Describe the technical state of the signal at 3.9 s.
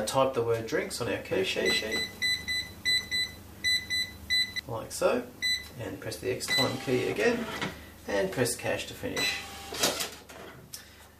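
At 3.9 s the signal carries a doubled audio track, running from 1.31 s to 4.59 s. A second copy of the same sound trails the original by roughly a third of a second, at about 5 dB lower. The copy is full-band and dry, with no decay or room colour. It is likely a second capture through a slower path, or two copies held out of step. The echo appears and vanishes abruptly at the span's edges.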